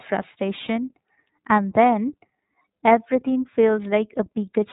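Throughout, the speech carries iLBC codec damage: a hard ceiling near 3.8 kHz leaves an empty spectrogram above, and rough, synthetic texture fits 30 ms frames at 13.33 kbps.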